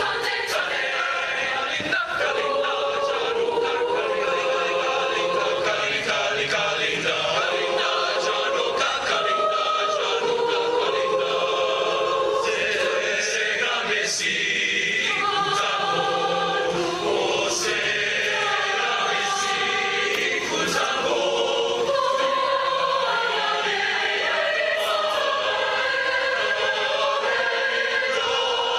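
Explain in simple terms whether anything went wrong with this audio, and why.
Nothing went wrong with this audio; it just came through an ordinary internet call connection, which softens the very highest sounds a little, and no faults can be heard.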